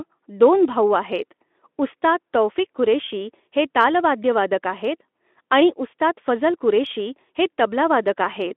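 No technical faults can be heard in the speech, which sits in a 250 Hz to 3.5 kHz line band and carries only the light coding texture expected of a Speex link at around 15 kbps.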